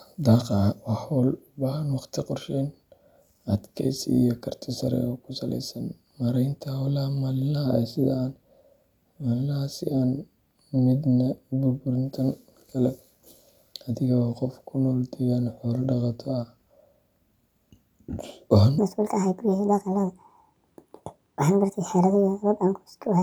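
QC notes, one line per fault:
18.78–23.22 s, section at the wrong speed: from 18.78 s to the end, the speech runs 1.58 times too fast, so pitch jumps up by roughly seven semitones and the delivery turns hurried and chipmunk-like at once. This is likely a clock mismatch during playback or editing. Unlike a pitch-shift fault, timing and pitch move together here. Syllables shorten in step with the raised pitch instead of keeping their natural length.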